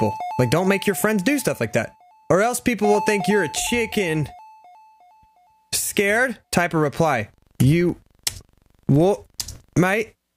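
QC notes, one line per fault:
7.17–9.91 s: filter restarted on every block. The filter loses its state at each block boundary and starts from silence, so a small transient opens every block. This produces a level-following buzz at 23.4 Hz, which fits a 2048-sample block. The waveform shows evenly spaced spikes, and the spectrogram shows regular vertical striations.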